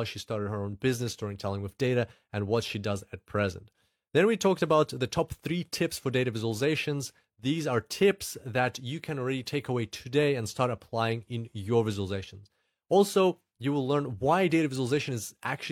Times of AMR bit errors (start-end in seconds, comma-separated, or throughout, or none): none